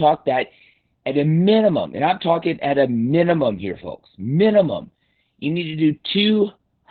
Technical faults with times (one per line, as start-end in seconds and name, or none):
0.00-6.90 Opus voice compression